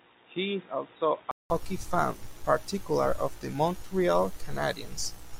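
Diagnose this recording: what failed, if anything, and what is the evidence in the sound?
Input device stage. Until 1.5 s the sound is dull, with nothing above 3.8 kHz, and about 5 dB quieter. A 0.19 s silence comes before "fan particularly of the". Likely the input switched to a poorer device, then back.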